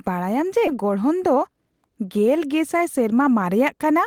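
At 0.67 s the speech jumps forward in a skip ahead. About 0.7 s of audio was dropped while later packets were already queued. Nothing fills the hole. The two sides are joined almost directly, so the sound lurches abruptly onward.

From 1.26 to 1.73 s comes a jitter buffer speed-up. The buffer held too much delayed audio. The receiver trimmed short pitch-period pieces, roughly 50 ms in all. Speech runs at 111% speed with unchanged pitch and sounds hurried.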